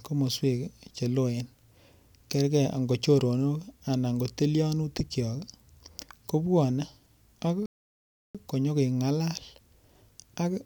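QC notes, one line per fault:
7.66–8.35 s, playback stall. The speech cuts to silence mid-flow for about 0.69 s, then resumes just before "konyo keng'alal". The player likely ran short of data or was blocked, so output halted until it caught up again.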